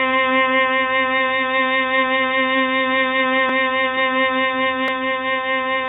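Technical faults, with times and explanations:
Throughout, AAC compression: the music is dull and smeared, with nothing above 3.8 kHz and a warbling, fizzy texture on sustained tones, which points to heavy AAC-LC coding at around 16 kbps. At that rate the encoder likely lowers its cut-off, starves bands of bits and leaves spectral holes that shift from frame to frame. That shifting, watery character is what separates it from a plain low-pass filter, which would sound dull but stable and clean.
3.49 s and 4.88 s, repeated buffer: each is a brief click or buzz, not a stutter, because the repeated piece lasts only about 1.45 ms, which fits a 64-sample buffer. When fresh audio arrived late, the device replayed the last block, once at 3.49 s and twice at 4.88 s, with a hard join at each repeat. Almost no audio goes missing, which separates this from a dropout, where a gap would be heard.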